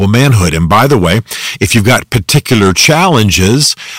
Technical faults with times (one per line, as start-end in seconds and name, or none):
0.00-3.98 hard clipping